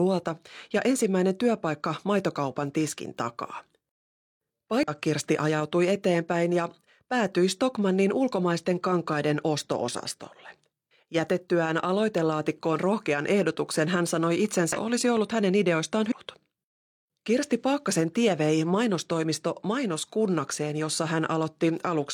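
Damaged data in a compressed stream breaks the speech at 4.83–4.88 s, at 14.73–14.79 s after "rohkean ehdotuksen hän sanoi", and at 16.07–16.13 s after "olisi ollut hänen ideoistaan". Corrupted frames make the decoder misread and resync, giving brief chirps, squawks, clicks or short holes.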